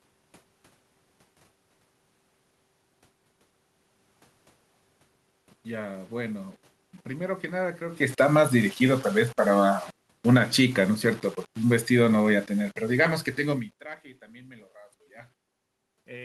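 From the start, the speech carries a grainy, rough edge that shifts with the sound itself. This is low bit depth without dither. The signal was likely rounded to about 7 bits. The error sits only about 30 dB below the speech, so quiet passages turn gritty.

At 7.55 s, automatic gain falling sets in. The control judged the input too loud, or its background noise too strong, and eased its gain down by 11 dB. The speech and the room noise sink together until 13.77 s. The talker's movements near 8 s and 13.5 s add their own level shifts.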